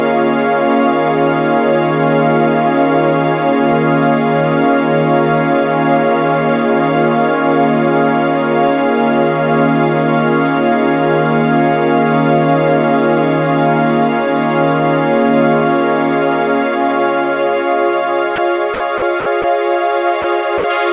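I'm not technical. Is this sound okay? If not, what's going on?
No. Near the end, the sound briefly cuts to steady noise or near silence at 18.36–18.38, 18.74–18.80, 18.98–19.02, 19.20–19.26, 19.42–19.44, 20.22–20.24 and 20.58–20.64 s. This is likely sound dropped by the voice detector: it mistook real sound for background and stopped sending, so filler noise was played instead.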